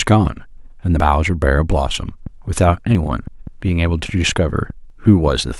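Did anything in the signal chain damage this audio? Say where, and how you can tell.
Yes. The speech has skips at 1.0, 2.95 and 4.9 s, where roughly 50 ms of audio disappears and the two sides butt together with no gap of silence. That points to audio missing between chunks, most likely at the buffer or recording stage: the process appears to handle the stream in 2-second blocks and drop a short slice at each handover. The evenly spaced cuts, about two seconds apart, are what give it away.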